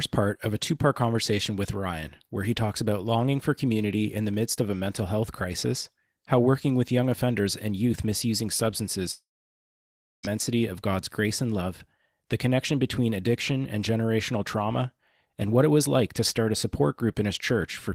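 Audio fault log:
9.11–10.25 s, long network dropout (likely): a short fading buzz, then about a second of silence; speech resumes with that stretch lost, unlike a brief glitch.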